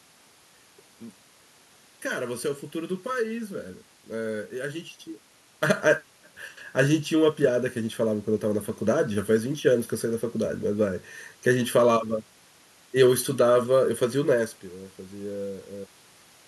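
From start to finish the speech carries channel delay (comb filtering). One channel arrives under a millisecond late, and when the two are folded to mono the shared sound cancels at regularly spaced frequencies, the first notch sitting around 700 Hz and further ones repeating at about 1.4 kHz intervals. The result is a hollow, phasey tone that never changes. Unlike a talker moving, heard as level shifts near 5 s and 14.5 s, these notches stay fixed in pitch and constant in depth.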